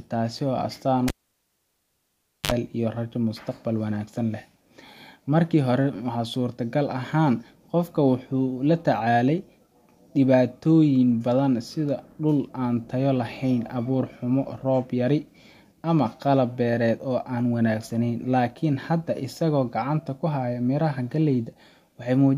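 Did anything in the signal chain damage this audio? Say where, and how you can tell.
Yes. The damage is in the analogue wiring: a cable was pulled and plugged in again while live. At 1.08 s there's a pop and the speech drops to near silence for about 1.4 s. There's also a short burst of 50 Hz mains buzz, roughly 50 ms long. That's the plug tip touching before the sleeve grounds. Then a second pop at about 2.5 s as the signal returns.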